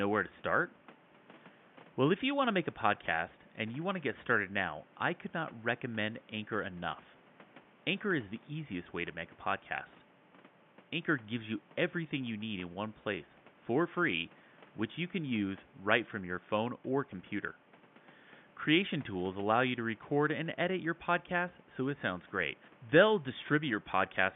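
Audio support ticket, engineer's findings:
No system faults found.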